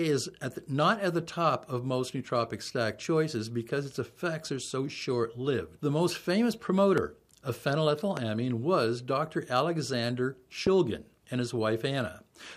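At 6.98 to 7.00 s, 8.17 to 8.19 s and 10.67 to 10.69 s, a loud pop cuts through the audio, each a single sharp burst lasting about 20 ms and peaking some 15 dB above the surrounding signal. The likely cause is a sudden voltage step or pulse, from a switch, connector, static discharge or driver glitch, entering the chain and being shaped by the circuitry downstream. The underlying sound continues beneath each pop.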